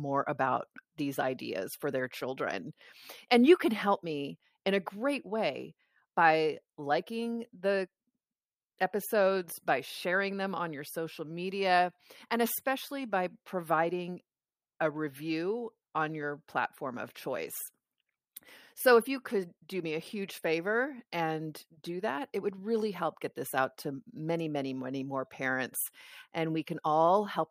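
A speech recording with no technical faults to report. Nothing along the signal chain calls for comment.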